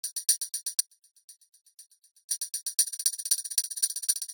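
The sound cuts out abruptly at 0.81 s and stays out for about 1.5 s, until 2.31 s. During that gap only a faint sound remains, around 25 dB below the normal signal level. This audio dropout to a faint residue likely comes from a momentary loss of the feed while the downstream path stayed live. From 2.8 s to the end, a time-stretched section suddenly runs about 1.94 times faster, sounding rushed while the pitch holds steady. Software squeezing the audio to fit a shorter length is the likely cause, keeping the pitch by dropping short pieces.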